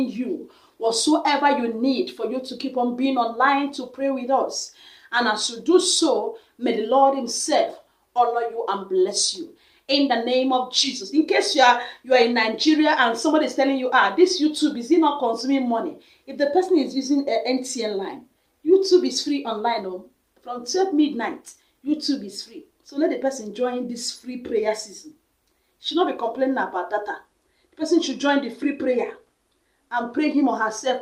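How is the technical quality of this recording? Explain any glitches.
The technical quality of this recording is sound, with no glitches to explain.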